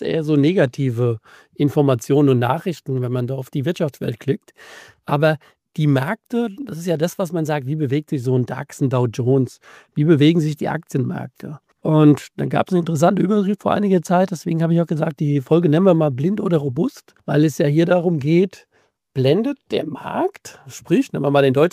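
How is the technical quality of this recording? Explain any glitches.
No glitches or faults heard.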